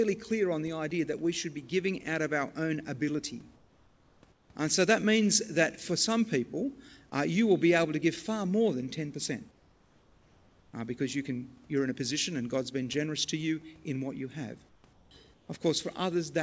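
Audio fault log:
3.56–4.23 s, 4.32–4.50 s, 9.51–10.73 s, 14.69–14.84 s, 14.93–15.11 s, 15.34–15.49 s: comfort noise in place of the background. In these pauses the room hiss turns flat and featureless, and it drops by about 2 to 5 dB. The fourth and fifth follow "in what you have". The likely cause is discontinuous transmission. The sender goes quiet when it detects no speech, and the receiver fills the gap with synthetic noise. The clip has no content above 8 kHz, which fits a G.722 call path.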